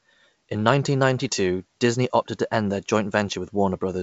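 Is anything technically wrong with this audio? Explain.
No, no technical faults.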